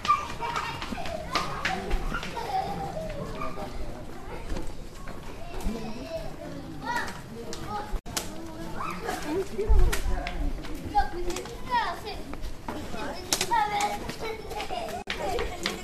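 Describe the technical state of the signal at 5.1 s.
At 5.1 s the signal is intact, with no dropout, clipping, glitch or other fault to be heard at that moment.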